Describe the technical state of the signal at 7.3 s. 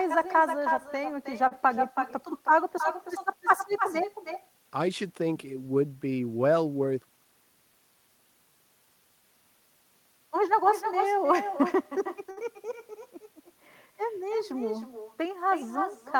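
At 7.3 s the signal is at the tail of a jitter buffer speed-up that runs from 6.96 to 7.33 s. The receiver had more audio queued than it wanted and trimmed it by cutting out a series of short pitch-period-sized pieces, around 50 ms in all. The speech plays at 111% speed with unchanged pitch and sounds briefly hurried. On a spectrogram the harmonics stay at the same height while syllables and gaps squeeze closer together. In the waveform, periods drop out at splice points with no visible gap.

Echo with no canceller is also present here. The far end's loudspeaker feeds back into its microphone and nothing removes it, so the talker's voice returns around 300 ms later at about 6 dB below the original, thinner. A spectrogram shows each syllable repeated as a fainter copy shifted right by that delay. The waveform shows a smaller, delayed envelope trailing each burst.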